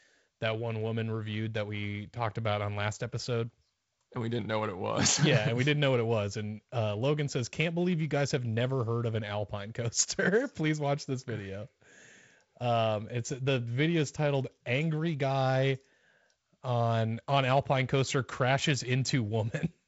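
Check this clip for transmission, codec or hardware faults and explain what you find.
No faults found in this speech; the G.722 wideband telephone coding is working normally, with the band stopping near 7.7 kHz and a light hiss, and the 48 kbit/s mode leaves the lower band slightly noisier.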